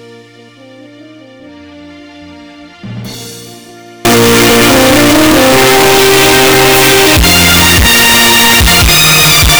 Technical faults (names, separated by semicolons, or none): float read as integer